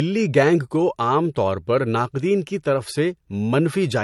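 Across the whole speech clip, nothing sounds above 12 kHz, and two kinds of coding grit overlap: watery smearing plus a thin, synthetic shimmer. This points to a likely transcoding between lossy codecs, an MP3 encode near 54 kbit/s re-encoded as HE-AAC near 48 kbit/s, each pass stacking its own artefacts.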